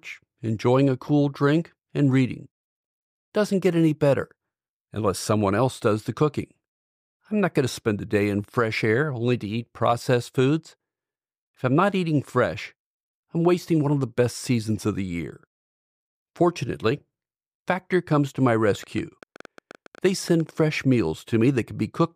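A speech recording in which something, likely interference from nearby equipment or a faulty connection or power supply, injects a train of clicks from 18.75 to 20.60 s: around twenty similar pulses at about 9.3 per second, unevenly spaced, ticking over the speech at roughly its level.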